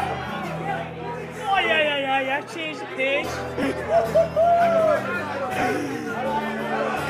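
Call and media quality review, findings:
Lost LE Audio frames at 3.63 s (about 7.5 ms gap, consistent with one LC3 frame) and 5.61 s (about 15 ms, fits two frames). Symptom: brief noisy smear where tonal content should continue. Component: Bluetooth LE Audio link and LC3 decoder concealment. Mechanism: decoder repeats the last spectrum with randomized signs. Spectrogram shows harmonics dissolving into a short broadband smudge. Waveform shows a burst of phase-scrambled texture in place of periodic cycles.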